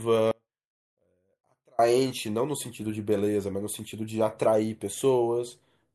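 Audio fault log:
0.31–1.79 s, audio dropout to a faint residue: the speech cuts out abruptly for about 1.47 s, leaving only a faint leak about 35 dB below normal level, then returns mid-flow; likely a signal loss upstream while the downstream path stayed live.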